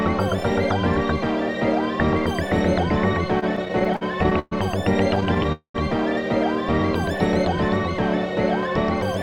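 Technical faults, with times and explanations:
3.39–4.53 s and 5.15–5.46 s, repeated stalls (stutter): the audio halts eleven times, then five more, with each halt bridged by repeating the last sound. Up to 122 ms are filled per stall, and nothing is lost. The spectrogram shows flat, smeared stretches; the waveform shows copied cycles.
5.52–5.76 s, call audio freeze: 220 ms are filled with the last sound held and fading that ends in about 100 ms of silence, then the audio resumes where it stopped, now 220 ms late. The likely cause is packets held up on the way, draining the jitter buffer. The spectrogram shows horizontal streaks fading to a blank patch.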